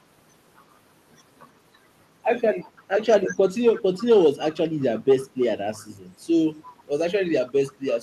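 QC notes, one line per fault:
2.77–2.83, 3.73–4.05, 4.49–5.43, 5.75–5.85, 6.67–6.71 and 7.47–7.98 s: echo leak. A faint copy of the speech trails it by 337 ms, roughly 25 to 35 dB down, in scraps. This is likely a loudspeaker echo that the far end's canceller failed to remove and sent back.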